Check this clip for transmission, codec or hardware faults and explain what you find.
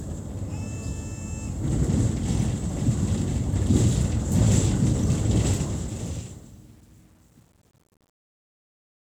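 The fade-out carries a quantisation fault. Truncation distortion on a fade runs from 5.31 s to the end at 9.15 s, and is worst from 5.94 s onward. As the level drops through the fade, the gain stage rounds each sample to too few levels, consistent with roughly a 9-bit word length, with no dither. The tail therefore turns grainy and gritty instead of thinning away cleanly.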